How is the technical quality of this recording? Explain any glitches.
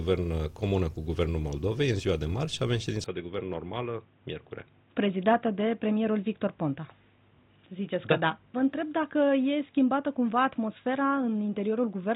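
The recording degrades partway through. From 3.04 s to the end the sound turns dull and boxy, with nothing above 3.8 kHz, drops about 5 dB in level, and gains a faint new background noise. This is likely an input switched to a poorer device. The simultaneous shift in tone, level and noise floor distinguishes it from a simple low-pass filter.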